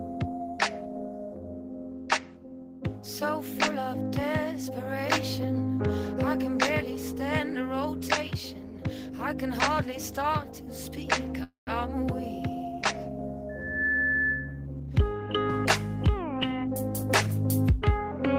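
At 11.43 s the audio stalls for about a quarter second until 11.69 s: the last sound carries on as a fading buzz and then about 130 ms of near-silence, before resuming exactly where it left off with nothing lost. This is a call audio freeze, likely from delayed packets draining the jitter buffer. On a waveform it looks like a decaying tail followed by a flat stretch; the spectrogram shows smeared, fading bands and then a blank gap. From 13.49 to 14.66 s a loudspeaker feedback squeal appears, a single tone at 1.7 kHz that swells over roughly 0.4 s until it is about as loud as the rest of the sound. The microphone is picking up its own loudspeaker and the loop gain exceeds one at that frequency. A spectrogram shows a bright horizontal line at 1.7 kHz; the waveform envelope bulges and then holds. Jitter buffer speed-up follows from 14.80 to 15.37 s at 126% speed, trimming about 150 ms, and again from 16.14 to 16.69 s at 107%, trimming about 40 ms. 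The pitch stays the same but the sound is hurried, as short pitch-period chunks are dropped to shrink an overfull buffer. On a spectrogram, events look compressed in time while the harmonic spacing is unchanged.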